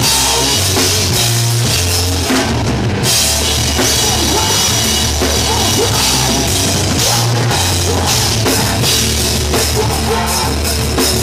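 Nothing in this audio stands out as a technical problem; there's no dropout, glitch or distortion anywhere along the way.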